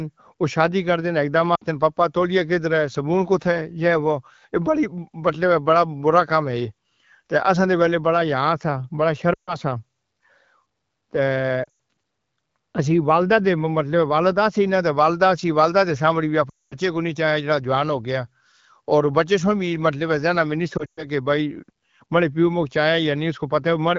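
Lost AMR speech frames at 1.55 to 1.63, 9.33 to 9.56, 11.64 to 11.68, 16.49 to 16.76 and 20.77 to 21.06 s. Radio errors wiped out frames, so the decoder kept repeating its last good settings at falling gain. The speech drops to near silence within two frames, longest around 16.5 s.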